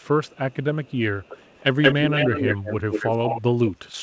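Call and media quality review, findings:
Echo leak at 0.0–0.08, 0.24–0.64, 0.84–0.98 s (faint, 260 ms lag); 1.22–1.63, 1.82–2.75, 2.91–3.42 s (180 ms lag, rising to near speech level). Likely far-end echo canceller residue. Discrete delayed copy, not a diffuse reverb tail.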